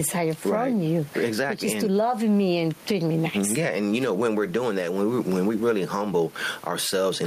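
Throughout the speech, the level pumps, pulling down on loud moments and rising again in the gaps, with swings of around 15 dB that leave the delivery squashed. This gain pumping likely comes from input gain set far too high, with a fast limiter clamping each loud sound. The room noise sits about 32 dB below the speech.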